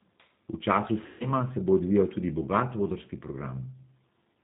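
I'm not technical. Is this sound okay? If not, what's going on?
No. The whole recording has passed through the G.729 codec, a very compact phone-call format. It rebuilds the voice from a rough model of the mouth and throat instead of keeping the real sound. So the speech stays clear enough to follow, but it sounds rough, slightly robotic and thin. Nothing in the higher, crisper range survives, and the damage is plainly audible throughout.

There is also VoIP packet loss concealed by the speech codec, from about 1.06 to 1.27 s. Some pieces of the call, roughly a seventh of a second of sound, never arrived. The decoder filled the gap by stretching the last bit it heard into a buzzy tone or a noise that fades. The voice then takes a moment to recover, so it sounds weak or distorted as it comes back with "se bo odvijal tudi".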